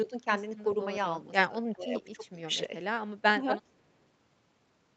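The speech dips in level four times, at 0.05–0.13 s, 1.48–1.54 s, 1.74–2.42 s and 3.35–3.45 s. The likely cause is speech suppressed in double talk: with both ends talking, the echo canceller couldn't tell this talker from the far-end echo and pulled everything down. The first dip is slight, around 5 dB. The one near 1.5 s is deep, about 20 dB. The longest stretch, near 2 s, pulls the voice down by about 15 dB over roughly 400 ms.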